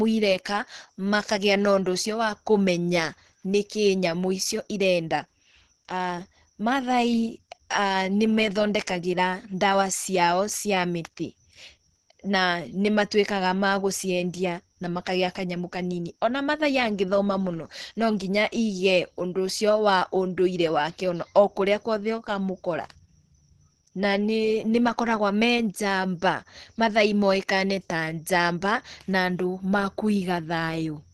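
Speech, with plainly audible codec damage throughout. Nothing sounds above 12.1 kHz, and the sound is hoarse and muffled. That points to low-bitrate Opus compression, likely in its hybrid speech mode.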